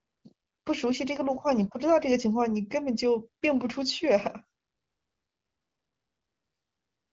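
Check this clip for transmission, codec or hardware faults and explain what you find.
Nothing stood out on listening to this speech, which comes across with the limited top end of an AMR wideband (HD Voice) call, with no content above roughly 7 kHz.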